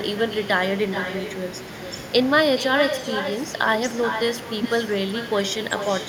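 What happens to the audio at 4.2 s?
At 4.2 s the speech carries echo with no canceller, present throughout the clip. The far end's loudspeaker feeds its microphone unchecked, so each phrase returns around 0.4 s later as a thinner copy, about 9 dB below the direct speech.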